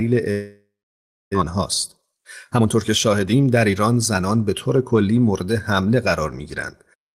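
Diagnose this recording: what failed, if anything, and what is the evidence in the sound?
Long network dropout, 0.31 to 1.35 s, at the network stage. The speech breaks off and the last sound is stretched into a fading buzz, then about 0.64 s of silence. About 0.6 s of speech never returns. The likely cause is that packets stopped arriving and the receiver concealed the gap before muting.

Jitter buffer speed-up, 1.41 to 4.19 s, at the buffer stage. The speech runs at 114% speed with unchanged pitch and sounds hurried. Audio built up in the buffer after the gap, and the receiver repeatedly cut pitch-period-length slices, removing roughly 0.4 s to bring the delay back down.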